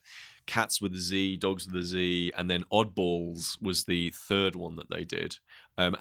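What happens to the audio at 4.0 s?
At 3.99 s the speech turns briefly rough and noisy for about 20 ms. This is a lost packet rebuilt from error correction: the sound points to a single dropped packet, replaced by the lower-bitrate copy carried in the following packet.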